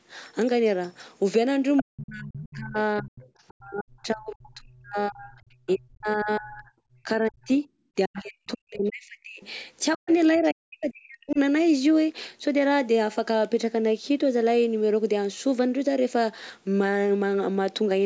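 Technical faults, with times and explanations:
1.77–3.51 s, 5.67–6.36 s, 8.14–8.21 s and 9.42–11.36 s: other side's voice leaking through. A second, fainter voice sits under the speech, about 10 to 30 dB below it, likely loudspeaker echo the canceller missed. It adds a voice rather than removing one.
1.82–11.39 s: speech suppressed in double talk. While both sides overlap, the main speech dips by as much as about 40 dB for around seven seconds in total. This is likely the canceller attenuating its own talker along with the echo, so the near voice drops out rather than a second voice appearing.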